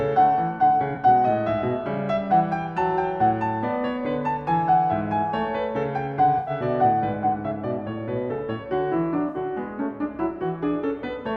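A music clip with AAC frame loss and concealment at 0.94–0.98, 6.38–6.50 and 9.28–9.37 s. The decoder rebuilds missing frames from the last good spectrum, leaving brief smeared, phasey patches. On a spectrogram these show as blurred vertical bands without crisp onsets. The longer gaps span several roughly 21 ms frames.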